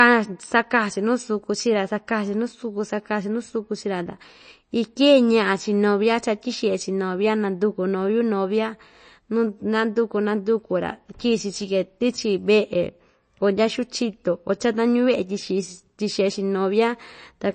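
From start to finish the speech sounds watery and swirly, with metallic chirps on s sounds and a treble that stops dead at about 8.3 kHz. This is likely MP3 compression at a low bitrate, consistent with about 32 kbps, cutting high frequencies and dropping weak components frame by frame.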